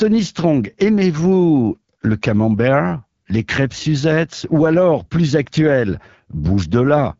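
From start to end, the speech carries AMR wideband (HD Voice) codec damage. The roughness fits one of its lowest rates, near 8.85 kbit/s. The vocal tract model loses detail and voicing turns raspy and rough. Nothing sounds above 7.5 kHz.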